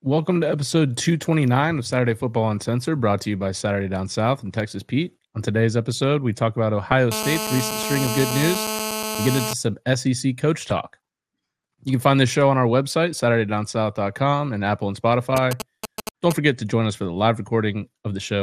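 Throughout the speech the sound is dull and carries a granular, gurgling roughness, with upper bands flickering in and out. This is likely MP2 compression at a rate around 80 kbps, where Layer II's 32 sub-bands get too few bits, so top bands shut off and the rest are coarsely quantised. It is a constant character, not isolated events.

At 6.92 s, just after "episode we talk about", a brief disturbance marks DAB burbling. A few bit errors slipped past the error correction into the MP2 audio data, disturbing sub-bands over three frames. It is brief, unlike the steady codec dullness.

From 7.12 to 9.53 s a hard, raspy buzz at 217 Hz, rich in harmonics, sits about 5 dB below the speech. This is GSM phone buzz: a nearby 2G phone in a call transmits bursts 217 times a second and the audio circuit rectifies them. It stays steady, unrelated to the speech.

From 10.57 to 10.78 s a longer stretch of burbling returns, again DAB burbling. 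The same low error rate hits 14 frames. Its burbling differs from the fixed-pitch rasp of the phone buzz.

From 15.37 to 16.33 s, ending just before "forget to join us", a galloping dit-dit-dit of short 217 Hz buzzes appears, roughly 5 dB below the speech. These are GSM signalling bursts: the phone sends only short groups of bursts, so the buzz stutters in clusters rather than holding steady as in a call.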